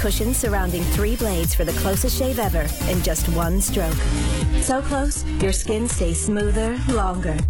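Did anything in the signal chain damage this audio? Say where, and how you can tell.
Yes. At the network stage, the player switched to an adaptive stream at a lower bitrate from 3.99 s to the end. The quality drops suddenly with no gap, and nothing remains above 11.5 kHz, which fits a switch from 96 kbit/s AAC to HE-AAC near 12 kbit/s.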